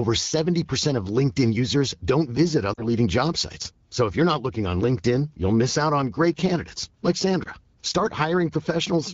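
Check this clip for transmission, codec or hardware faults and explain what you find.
There's one transmission fault here: lost AMR speech frames, twice, carried over an AMR wideband (HD Voice) link whose light coding sounds consistent with a 12.65 kbit/s mode. From 2.74 to 2.87 s, and again from 7.43 to 7.49 s, the decoder lost frames that failed their checksum. It patched the gaps by repeating the last good pitch and vocal tract settings at dropping gain, which fits two lost frames and then one. You hear a short smeared dip and a briefly rough recovery.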